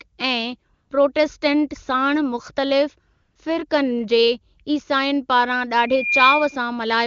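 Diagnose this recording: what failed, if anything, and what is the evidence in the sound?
Call processing and codec stage, AMR comfort noise. Twice the transmitting side's voice activity detection judged the line silent and stopped sending speech frames: from 0.73 to 0.89 s (160 ms) and from 3.13 to 3.35 s (220 ms). In both gaps the real background gives way to a smooth, steady synthetic hiss that the receiver built from a coarse level-and-spectrum description. It switches in and out abruptly against the clean wideband speech around it.

Acoustic loop between loudspeaker and microphone, loudspeaker feedback squeal. At 5.87 s a single tone near 2.4 kHz appears and swells over about a third of a second until it sits roughly 5 dB above the speech. It persists until 6.62 s. The microphone was re-capturing its own loudspeaker output, and at 2.4 kHz the loop gain exceeded unity, so that frequency kept amplifying itself.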